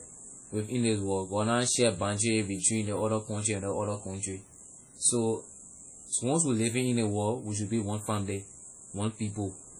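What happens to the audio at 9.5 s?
At 9.5 s the speech carries the same heavy WMA compression damage heard across the whole clip, likely from a low-rate encode around 32 kbps. Long transform blocks smear quantisation noise over tens of milliseconds, so syllables ring and wash while a hiss swells and fades with the signal. On a spectrogram, weak components are zeroed into patchy holes and smeared blocks, with nothing above about 20.1 kHz.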